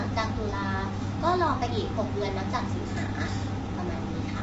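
Speech with rough, grainy coding damage throughout, noise filling the gaps between harmonics and nothing above 7.7 kHz, likely low-delay AAC compression at a low rate around 24 kbps.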